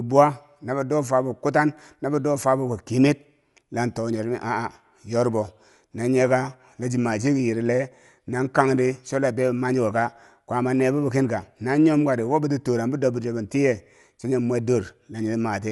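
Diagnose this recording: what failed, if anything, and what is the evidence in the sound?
Dull, rough speech throughout, nothing above 11.5 kHz: codec stage, likely Dolby Digital compression, which fits a 64 kbps encode filling empty bands with noise.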